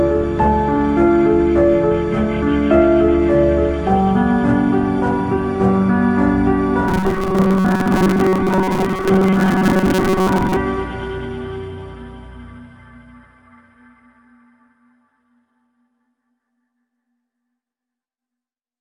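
Robotic sound from repeated short buffers, 6.88 to 10.58 s: a rigid 188 Hz metallic buzz, likely a 5 ms chunk replayed while about half the audio is skipped.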